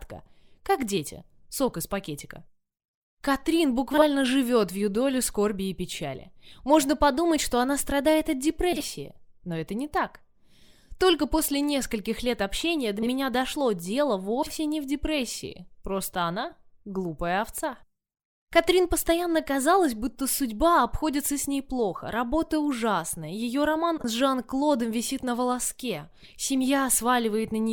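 Frames arrived out of order five times, and the decoder played them in the sequence received, so two adjacent blocks of audio trade places each time. The swapped runs last about 40 ms each, which fits runs of four frames, at 3.93–4.03, 8.72–8.83, 12.98–13.10 and 14.43–14.53 s. At 23.98–24.03 s the runs are about 20 ms, consistent with two frames. Each sounds like a brief garbled flutter, and no time is lost.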